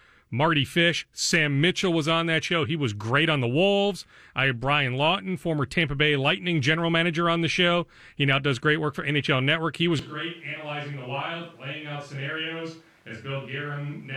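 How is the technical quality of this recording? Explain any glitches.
The recording has one clear fault. At 9.99 s the sound changes abruptly and stays that way to the end: a switch to a distant microphone. The speech turns roomy and hollow, with thinner bass. The level falls by roughly 10 dB, and background noise rises to roughly 30 dB below the speech. The cause is likely a failed or dropped close microphone. The recording then relies on one farther from the talker, which picks up more room reflection and noise.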